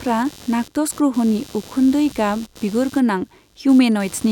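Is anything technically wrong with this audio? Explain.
Yes. Throughout the speech, a buzzy, chattering noise pulses at roughly a hundred times a second, about 25 dB below the voice. It is computer activity noise: processor, graphics or mouse load shifts the shared ground of the audio circuit, so the interference follows the machine's activity, not the sound.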